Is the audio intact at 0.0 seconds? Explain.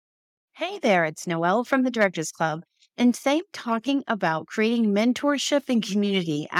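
Yes, the speech at 0.0 seconds is intact, with no fault present at that moment.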